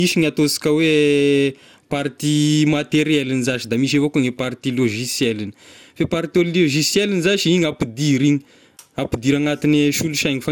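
The speech shows generation loss from start to finish. It sounds swirly, smeared and hollow, and consonant attacks blur. Nothing remains above 18 kHz. This likely comes from about three rounds of lossy encoding, consistent with MP2 at 96 kbit/s, with each pass adding new quantisation noise.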